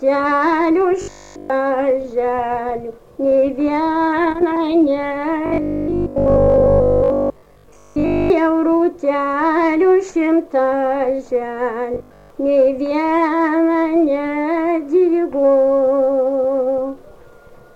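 At 1.02 to 1.50 s, 5.46 to 8.30 s and 11.94 to 12.30 s, the sound turns into a rigid metallic buzz at 50 Hz. This is robotic sound from repeated short buffers. It is likely caused by 20 ms buffers being replayed, wholly in the first stretch and mostly in the later two.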